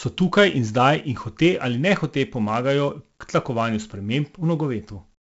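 A speech recording with 4-bit ADPCM compression throughout: a heavy gritty hiss rides on every loud stretch, with roughness on sharp onsets, and nothing above 7.7 kHz, which fits a 64 kbps stream. Unlike steady background hiss, this noise rises and falls with the signal level.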